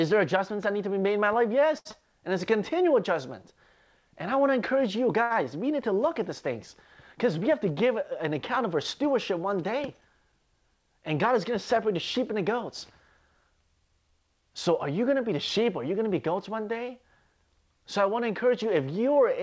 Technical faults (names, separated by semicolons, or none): short stall from a late packet; short concealed packet loss; jitter buffer speed-up